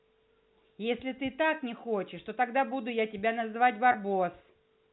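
A speech recording carried over G.711 telephone coding has one fault: packet loss with pitch repetition at 3.92 to 3.94 s. About 20 ms of audio went missing, which fits two 10 ms packets, and the receiver filled the gap by repeating the last pitch period. Because the gap is so short, it sounds like a brief held, buzzy tone rather than a dropout. On a waveform the gap shows as a run of identical repeated cycles. On a spectrogram, with its usual cutoff at 4 kHz, the harmonics appear as flat, frozen stripes before normal speech resumes.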